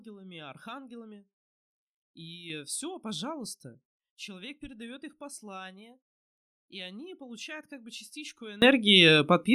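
Speech clip with two sudden gain jumps, likely a digital gain step applied without a ramp. From 2.5 s to 4.14 s the level sits about 6 dB higher, and from 8.62 s to the end at 9.54 s about 24 dB higher, with the voice and background noise rising together.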